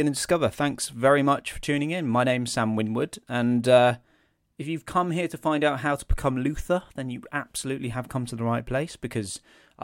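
No technical faults are audible.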